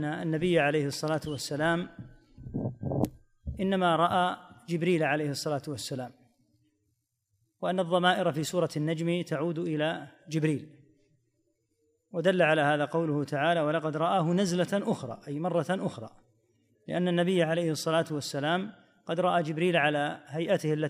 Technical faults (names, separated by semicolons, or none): corrupt frame decoded